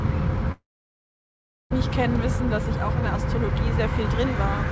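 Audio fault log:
0.52–1.74 s, long network dropout: the sound smears into a decaying buzz that dies away to silence, leaving a gap of about a second before audio resumes, with roughly 0.76 s of material never heard. This is likely a stall in packet arrival, with the receiver extrapolating the last frames and then muting, and a jitter-buffer delay shift of around 400 ms on recovery. The G.722 call path keeps its 8 kHz bandwidth limit throughout.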